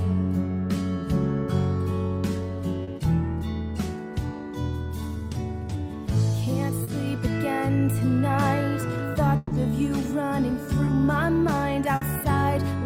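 Short concealed packet loss at 2.83–2.89 s and 6.83–6.89 s, 40 ms each. That much audio arrived too late to decode, so the receiver extended the preceding sound to bridge the gap and then crossfaded back, leaving a brief smear or wobble where detail drops out.

A burst of packet loss at 9.37–9.53 s removes 140 ms of audio. The receiver sustains the last sound and fades it down across the gap, so a held buzz or fading hiss replaces the missing stretch before the audio resumes further along.

Short concealed packet loss again at 10.85–10.89 s, about 20 ms, the briefest of these, heard as a quick blur.

Another burst of packet loss at 11.95–12.03 s drops 60 ms, heard as a shorter stretch of the same held, decaying fill before the audio jumps ahead.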